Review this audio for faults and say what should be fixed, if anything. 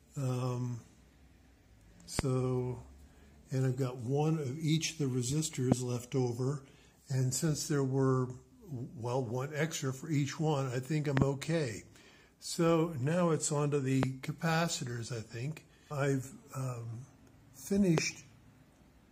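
Loud pops occur at 2.19–2.21, 5.72–5.74, 11.17–11.24 (a double pop), 14.03–14.05 and 17.98–18.00 s. Each peaks around 20 dB above the sound, which continues underneath. A sudden voltage step, likely from a plug, switch or static discharge, causes them. To prevent them, secure connectors, mute before switching and ground the equipment properly.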